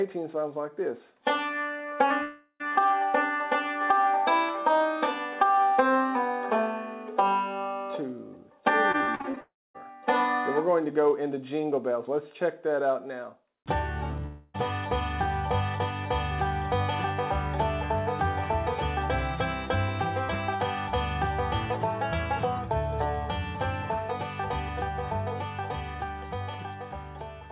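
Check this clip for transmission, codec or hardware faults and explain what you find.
Four network faults are audible: three long dropouts and one burst of repeated packet loss. The call path's band limit to 4 kHz fits a narrowband codec such as G.711 mu-law at 64 kbps.

Long network dropout, at 2.22 to 2.62 s, 9.41 to 9.76 s and 14.26 to 14.56 s: the likely cause is a stretch of packets that never arrived. About 0.38 s, 0.34 s and 0.28 s of audio are lost. Each gap is bridged by the receiver extending the last sound as a decaying buzz. The first fades to about 30 ms of silence, the second to about 230 ms, and the third has none before the audio resumes further on.

Repeated packet loss (robotic sound), 8.92 to 9.39 s: seven separate gaps, the longest 45 ms, cover about 36% of this span. Each hole is patched by continuing the previous sound, so the passage turns choppy and robotic. It runs straight into the second dropout.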